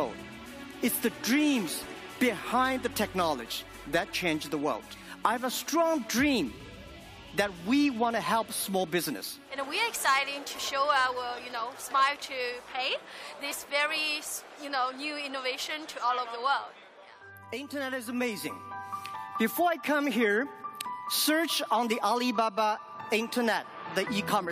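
No technical faults can be heard in this audio.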